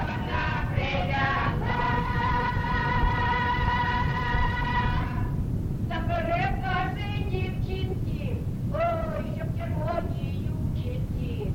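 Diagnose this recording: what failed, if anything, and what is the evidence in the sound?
Nothing failed in this recording, and the sound shows no evidence of a fault.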